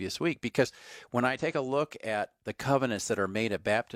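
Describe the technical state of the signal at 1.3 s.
At 1.34 to 1.39 s the speech is broken by damaged data in the compressed stream. The decoder hits corrupted bytes, misreads the affected frames and loses sync until it finds a valid frame header, producing a brief chirp or blip lasting about 50 ms.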